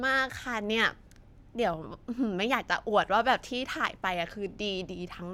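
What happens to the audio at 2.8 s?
Nothing goes wrong at 2.8 s; the speech carries straight through that moment with no dropout, click, glitch or other audible fault.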